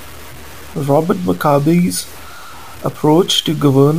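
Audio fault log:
throughout, low bit depth without dither: grainy distortion tracks the speech and quiet parts sputter, likely from undithered truncation to about 6 bits, with noise around 25 dB down.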